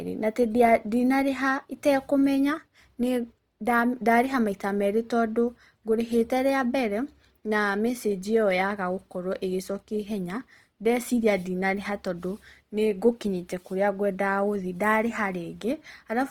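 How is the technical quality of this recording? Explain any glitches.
The recording has plainly audible coding damage from start to finish.

Opus compression, throughout: likely a music-mode encode consistent with about 24 kbps. Bit-starved bands get filled with folded or noise content, leaving the speech grainy and rough.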